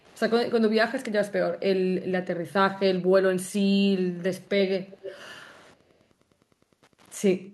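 A faint, steady ticking about ten times a second runs under this speech recording from start to finish, roughly 35 dB below the voice. That is Wi-Fi interference: the circuit picks up a nearby radio's beacon, repeating every 102.4 ms. Delayed, quieter copies of the voice appear at 0.00–0.18 s (lagging about 231 ms) and at 4.42–4.49, 4.88–5.21 and 5.40–5.75 s (lagging 288 ms). They are very faint except at 4.88–5.21 s, where the copy is only around 15 dB down. This is likely echo leak, where a loudspeaker's output slipped past the far end's echo canceller.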